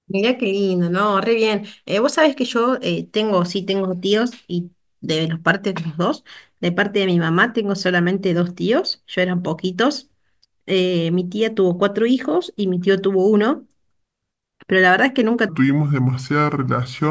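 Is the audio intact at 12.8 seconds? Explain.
Yes, at 12.8 seconds the speech plays through cleanly, with no dropout, distortion or other fault at that point.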